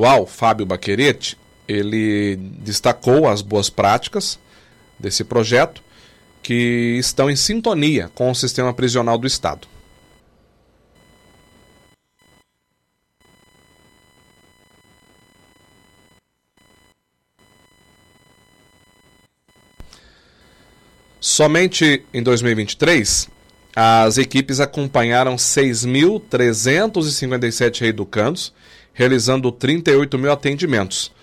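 A faint buzz with a chirping, scratchy edge sits under the audio from start to finish. Its pulses repeat at around 1 kHz, and it stays roughly 40 dB below the sound. It rises and falls with nothing in the recording itself. This is computer activity noise. Changing load on the machine's processor, graphics hardware or mouse shifts the ground that the audio circuit shares, and that fluctuating current leaks into the signal path as this interference.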